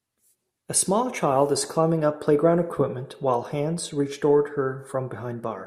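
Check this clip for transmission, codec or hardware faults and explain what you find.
Nothing turns up here worth flagging; the speech comes through steady and intact, with no transmission, codec or hardware trouble to point to.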